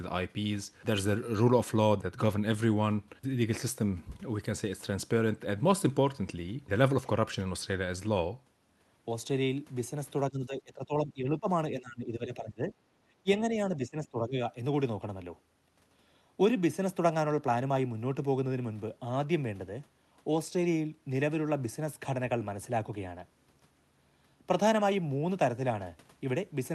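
From 10.3 to 11.48 s, 11.71 to 12.72 s and 13.23 to 14.37 s the speech dips by roughly 15 to 20 dB, thinning and breaking up in pieces. This is speech suppressed in double talk, likely an echo canceller attenuating the near talker while the far side spoke.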